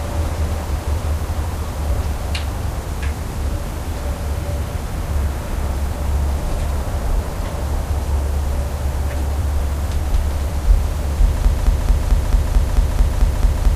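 At 11.45 s the audio falls into a broken-record loop that runs to the end. A fragment of about 0.22 s plays again and again, back to back, ten times. Each pass is identical, so the sound turns into a rapid, mechanical stutter with a fixed rhythm. The likely cause is a player, encoder or stream that stalled and kept sending its last held fragment. Whatever should have played in those final seconds is gone.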